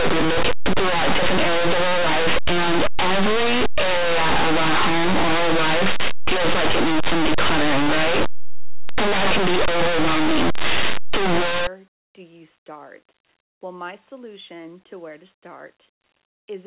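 From 0.0 to 11.67 s the speech is buried in very loud, harsh distortion. This is linear audio read as companded. The samples were stored as plain linear 8-bit values but expanded as if they were mu-law codes. Small values just to one side of zero map to the loudest outputs, while those on the other side stay quiet. So even soft passages blast out as a rough, crackling roar. Clean sound returns just before "do you start".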